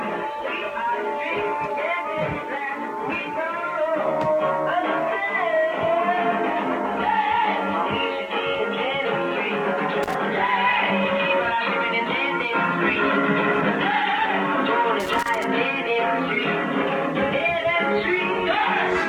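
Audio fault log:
8.97–9.07 s, compressed frames skipped: the audio hops forward by roughly 150 ms, as if a few whole frames never reached the decoder or got thrown out as damaged.
10.03–10.14 s and 15.00–15.45 s, loose connector crackle: two irregular bursts of scratchy crackle, the second one longer at almost half a second. That's a contact that isn't seating properly, rapidly making and breaking, so the signal gets chopped.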